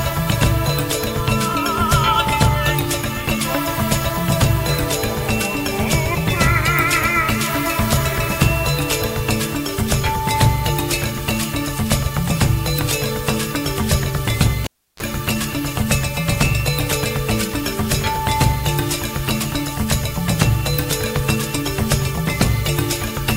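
At 14.64 s a cable is pulled and plugged in: a pop, then about 0.33 s of near silence, then roughly 33 ms of 50 Hz mains buzz as only the tip touches. A second pop at 15.03 s brings the sound back. That hum burst marks it apart from a plain dropout.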